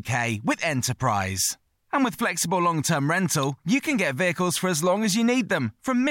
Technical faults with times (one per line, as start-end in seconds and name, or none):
3.43 electrical switching spike